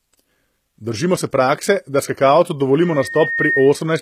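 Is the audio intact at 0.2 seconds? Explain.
No. At 0.2 s, as across the whole clip, there is plainly audible HE-AAC compression damage, likely from a low-bitrate encode near 20 kbps. Treble is rebuilt from copied lower bands, so s sounds turn gritty or lispy. A spectrogram shows repeated, misaligned harmonic patches above the crossover.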